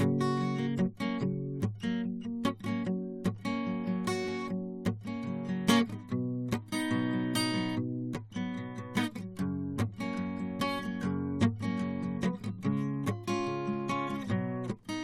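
Music, with no technical faults heard anywhere in the clip.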